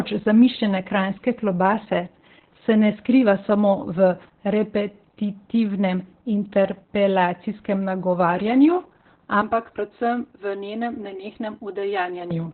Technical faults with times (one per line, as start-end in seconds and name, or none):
0.00-12.54 Opus voice compression
9.41-12.31 channel delay (comb filtering)